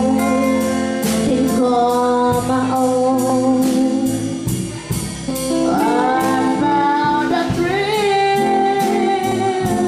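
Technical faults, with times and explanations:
1.29, 3.30, 5.30, 7.31 and 9.32 s: overlapping chunks. The audio moves through in blocks of 2.0 s, and each block begins about 7 ms before the previous one finished, so that sliver plays twice at every join. The repeat is too short to register as an echo and comes through as a click or stutter, evenly spaced about 2 s apart. No sound is lost, which tells it apart from dropped-buffer gaps. The strict regular spacing rules out random clicks.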